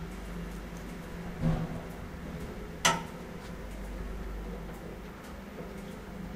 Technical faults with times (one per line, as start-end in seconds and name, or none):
none